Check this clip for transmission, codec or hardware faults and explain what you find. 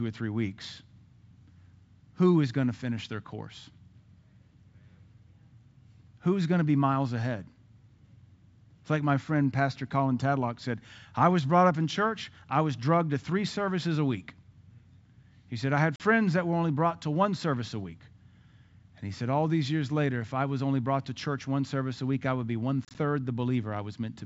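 One fault kind turns up, twice, on a G.722 wideband call whose coding is clear at what sounds like 64 kbit/s.

Packet loss on an ADPCM call: at 15.96 to 16.01 s the speech drops into a hard-edged silent gap of 40 ms, around four packets' worth. From 22.85 to 22.98 s, 60 ms of gaps scatter over 100 ms, the longest 30 ms. Lost packets were filled with silence, and the decoder's adaptive predictor and step size fell out of step with the sender's, so the speech resumes distorted until they realign.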